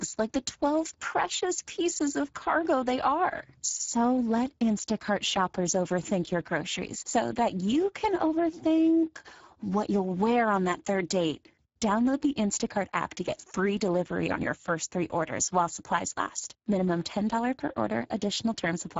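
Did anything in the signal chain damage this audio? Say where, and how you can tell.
Yes. Throughout the speech there is a rough, hoarse, noisy quality, and everything above 7.6 kHz is gone. The band from about 4 kHz up to that edge sounds like shaped hiss rather than real detail. This is Speex codec damage at the codec stage, and the coarseness fits a bitrate near 10 kbps. At that rate the CELP coder has too few bits to describe the excitation. It also fills the upper band with synthetic, noise-like energy.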